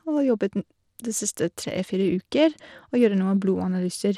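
Bluetooth SBC compression damage runs through the whole speech clip. Nothing is heard above 17.3 kHz. The treble flickers and a gritty noise rides on the sound. This likely comes from a small bit pool starving the top sub-bands, fitting a bitrate near 96 kbps.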